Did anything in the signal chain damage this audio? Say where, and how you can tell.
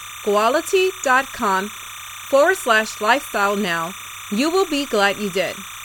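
Yes: timecode bleed throughout, a chirping warble around 1 and 2 kHz about 15 dB under the speech; 29.97 fps linear timecode crosstalk in the analogue wiring.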